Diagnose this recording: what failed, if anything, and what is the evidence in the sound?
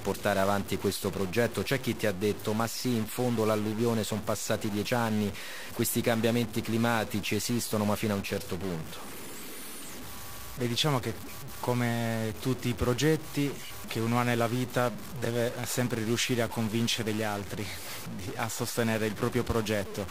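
Stuck bit throughout, likely at the converter: one fixed bit buzzes harshly over the speech and fills pauses with noise around -35 dBFS, where clipping would leave silence.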